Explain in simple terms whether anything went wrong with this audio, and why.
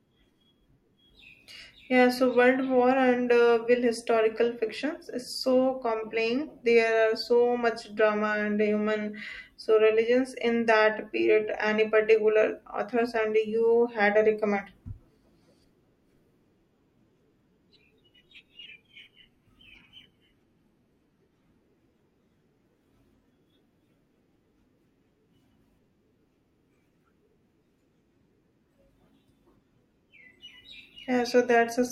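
A wrong sample rate problem runs from 18.66 to 21.61 seconds: the speech suddenly drags and drops in pitch. The sound was played back slower than it was recorded, about 0.92 times normal speed and roughly one and a half semitones lower, which fits 48 kHz audio being played at 44.1 kHz.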